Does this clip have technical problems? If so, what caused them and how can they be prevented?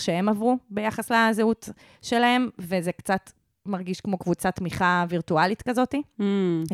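Yes. A faint, steady rattle of ticks runs under the speech from 0.1 to 6.7 s, about twenty per second. These are clock slip clicks, likely caused by two unsynchronised device clocks about 400 ppm apart, each slip dropping or repeating one sample. Locking both devices to a shared word clock, or using asynchronous sample-rate conversion between them, prevents this.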